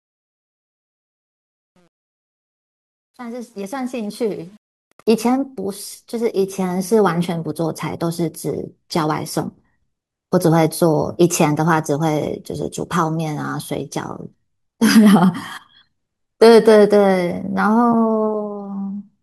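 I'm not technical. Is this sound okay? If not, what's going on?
No. The fade-in from 0 to 5.1 s has truncation distortion: the volume change kept too little detail, so the quiet start sounds gritty, especially before 4.1 s. Unlike ordinary background noise, the roughness appears only during the fade.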